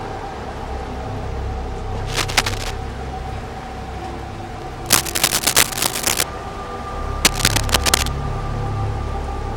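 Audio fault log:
2.07 to 2.72 s, 4.85 to 6.23 s, 7.24 to 8.09 s: cable scratch noise. A worn cable or connector being moved is the likely cause, its contact resistance jumping erratically. Each time, dense, uneven crackling bursts sit about 5 dB above the sound, heard as rough scratching.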